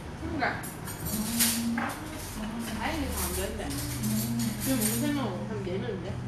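No technical faults can be heard anywhere in this recording of sounds, and the signal stays intact throughout.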